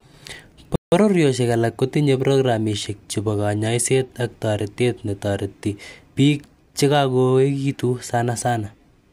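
Early in this speech recording the sound cuts out abruptly in mid-flow, falling silent from 0.76 s to 0.92 s, a gap of about 165 ms, before picking up again. The audio simply drops away and returns. This is a playback stall, most likely caused by the player starving for data or having its output thread blocked briefly, so nothing reached the output until it recovered.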